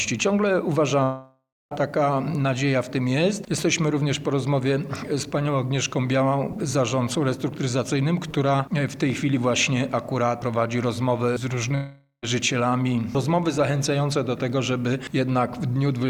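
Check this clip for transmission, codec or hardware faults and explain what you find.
Two gaps are audible, at 1.03–1.73 s and 11.75–12.24 s, consistent with a long network dropout. The likely cause is lost packets; the receiver extends the last sound as a fading buzz, then silence, and resumes with about 0.68 s and 0.48 s missing.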